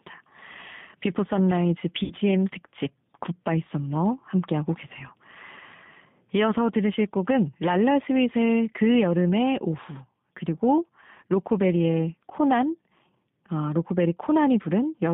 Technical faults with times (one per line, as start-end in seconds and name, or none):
0.00-15.14 G.729 codec
2.04-2.13 VoIP packet loss concealed by the speech codec